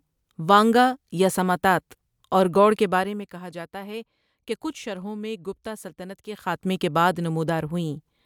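The speech signal shows no technical faults at any point.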